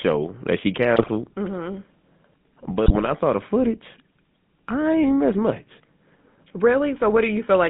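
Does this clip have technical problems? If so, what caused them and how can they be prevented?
Yes. The whole clip carries GSM full-rate codec damage, and it is plainly audible. The speech sounds buzzy and gravelly. That is because the codec models the vocal tract and excites it with a coarse, regularly spaced pulse train, which fits the 13 kbps full-rate scheme. The line band runs only from about 150 Hz to 3.6 kHz, so the top end is gone. To prevent it, route the call over a wideband or modern codec such as AMR-WB or EVS.

There are also GSM bit errors, heard twice. The first runs from 0.96 to 1.09 s, right after "that she". The second runs from 2.86 to 3.11 s, just before "saw the footage". Both sound like squawks, pops and gargling. Corrupted bits reached the decoder and scrambled the filter, pitch or gain values, so the spectrum bent or the level jumped for those frames. To prevent it, use a stronger radio link or better error protection and concealment.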